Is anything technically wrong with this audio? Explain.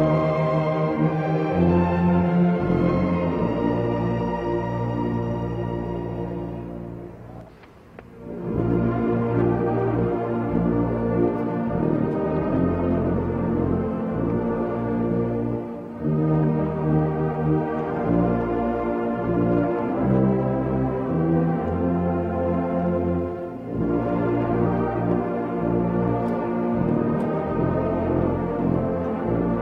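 No, nothing technically wrong can be heard in this audio. Playback continues steadily with no audible disruption at any point.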